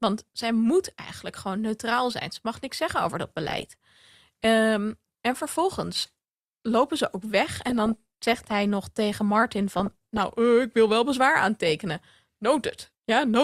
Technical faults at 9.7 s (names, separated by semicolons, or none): DAB burbling